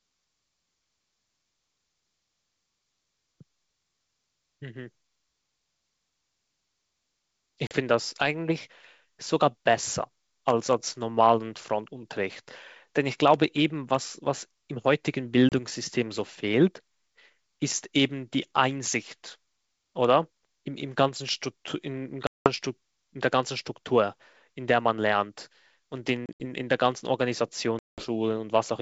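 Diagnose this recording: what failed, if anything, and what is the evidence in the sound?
Packet loss on an ADPCM call, at the network stage: hard-edged silent gaps at 7.67 s (40 ms), 15.49 s (30 ms), 22.27 s (190 ms), 26.26 s (100 ms, broken up over 140 ms) and 27.79 s (190 ms). The decoder's predictor and step size drift out of step with the sender's, so speech resumes slightly distorted before settling.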